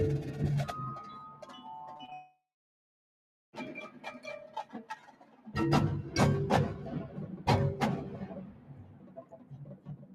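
A noise suppressor applied to music or sounds is active throughout. A processor tuned for speech keeps treating sustained material and decays as noise and pulling them down, so the level swings by around 15 dB and held sound pumps and thins rather than sitting steady.

Sound cut by the noise suppressor first appears from 1.27 to 1.67 s. The suppressor misjudges this passage as noise and lowers it by up to about 9 dB, so sustained content sinks and its tail is clipped short while sharper onsets come through.

Short concealed packet loss follows at 1.97–2.01 s, 2.05–2.10 s and 2.10–2.13 s. Each is roughly 20 ms of audio that arrived too late to decode. The receiver patches each gap by extending the preceding sound and blending back, which gives quick smears and a wobble in close succession.

A long network dropout runs from 2.13 to 3.55 s, with about 1.4 s of audio missing. The sound is briefly extended as a fading buzz or hiss and then drops to silence for roughly 1.15 s before resuming further on, with the intervening material gone. 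This is likely the receiver concealing a stretch where no packets arrived.

Sound cut by the noise suppressor returns at 4.47–5.50 s and again from 8.45 s to the end, each time dipping by up to about 11 dB. Steady and decaying parts sag and fade early while transients hold their level.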